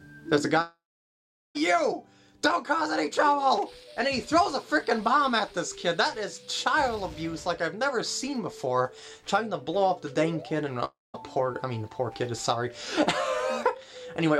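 From 0.61 to 1.57 s and 10.85 to 11.16 s, the sound stretches into a fading buzz, then near-silence. On a spectrogram this shows as a smeared band followed by a blank gap. This is likely a long network dropout.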